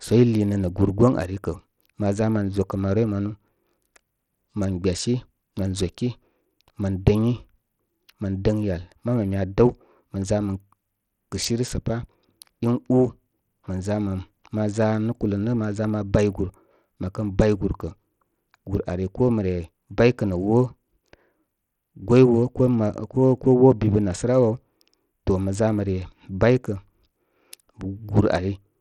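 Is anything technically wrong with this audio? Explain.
Yes. From start to finish the speech has a gritty, grainy edge, and its treble is thin and unsteady, flickering in and out rather than staying put. Aliasing rides along with it. This is likely Bluetooth SBC compression, with damage that fits a low bitrate of around 80 kbps: the encoder divides the signal into a few wide bands, starves the quieter upper bands of bits, and quantises the rest coarsely, which leaves that noise and unstable top end.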